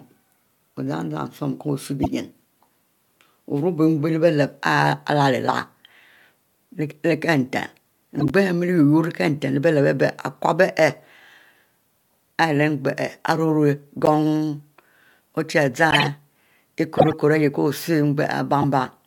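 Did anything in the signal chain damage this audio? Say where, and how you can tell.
Yes. The damage sits at the codec stage, where corrupt frames were decoded. Short bursts cut through the speech at 2.03–2.06, 8.20–8.31, 14.05–14.08, 15.91–16.07, 16.97–17.13 and 18.62–18.64 s. Each one is a chirp or blip of energy in the wrong frequencies. They are loud, reaching near full scale in the two around 16 and 17 s. Flipped bits garbled the gains and codes in those frames. The decoder played them anyway. So each burst spans only a handful of frames.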